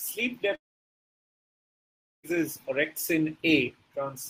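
A long network dropout runs from 0.55 to 2.26 s. The speech stops, its last sound trails on briefly as a fading buzz or hiss, then about 1.64 s of silence follows. Likely no audio arrived, so speech resumes with 1.68 s missing.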